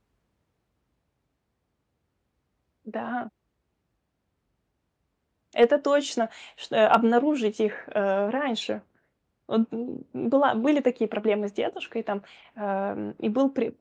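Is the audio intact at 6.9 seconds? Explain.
No. Hard clipping hits at 6.91 to 6.95 s, just after "точно чт". The speech peaks overdrive a stage by about 3 dB. Their tops are cut flat. This adds high harmonics, heard as a brief crackle on the loudest moments.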